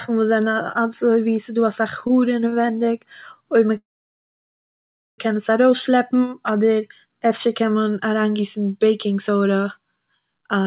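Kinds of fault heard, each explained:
Short stall from a late packet: Twice a packet reached the receiver late and the jitter buffer ran dry, so the last sound was stretched by 16 ms at 2.07–2.11 s and by 30 ms at 2.49–2.54 s. The speech is briefly held, then resumes intact.
Call audio freeze: Packets were likely held up in transit, emptying the jitter buffer. From 3.77 to 5.2 s the last sound is prolonged and dies away, leaving about 1.34 s of silence in a 1.41 s insertion. The speech then continues where it stopped.
Jitter buffer speed-up: With surplus audio queued, the receiver trimmed short pitch-period chunks repeatedly to reduce delay. From 10.41 to 10.64 s the speech runs at 140% speed, losing roughly a tenth of a second, and sounds rushed while keeping its pitch.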